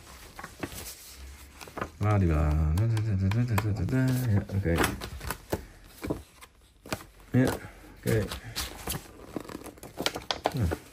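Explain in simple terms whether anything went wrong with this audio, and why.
At two moments the playback device ran out of fresh audio and, with nothing new to play, played its last small chunk a second time. This is a repeated buffer fault. Each repeated piece lasts about 12 ms, which fits a 512-sample buffer, so the repeat is too short to sound like a stutter. It comes out as a click or brief buzz with a hard join, at 0.81 s and 3.89 s. Essentially no audio is lost.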